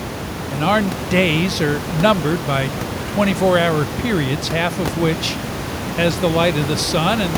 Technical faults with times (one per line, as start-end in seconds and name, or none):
none